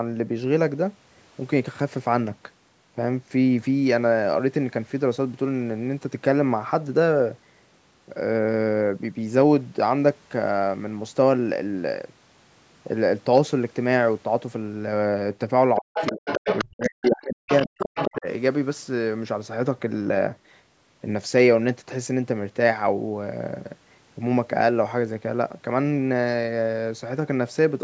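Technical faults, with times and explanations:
15.8 to 17.5 s and 17.67 to 18.27 s, speech suppressed in double talk: the talker's speech sinks sharply, by something like 40 dB at its deepest, for about one and a half seconds, then again for about half a second. Both sides were likely speaking at once, and the echo canceller, unable to tell the talker from the loudspeaker echo, turned the whole microphone signal down.
15.94 to 16.65 s, 17.05 to 17.25 s and 17.48 to 18.16 s, other side's voice leaking through: a second voice comes through in scraps. In the first and last stretches it sits only a few dB under the talker, and in the short middle scrap it is much fainter, around 15 dB down. This is likely loudspeaker playback of the far end that the echo canceller failed to remove from the microphone, arriving during the same double-talk moments.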